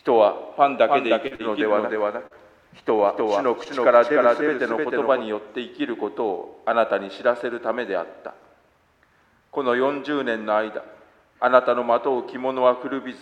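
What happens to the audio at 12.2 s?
Nothing goes wrong at 12.2 s, and the audio is intact at that point.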